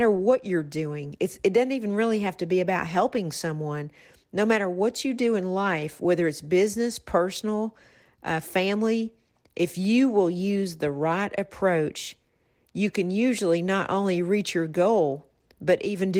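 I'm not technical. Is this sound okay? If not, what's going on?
Yes, this sound is okay, and nothing here needs fixing.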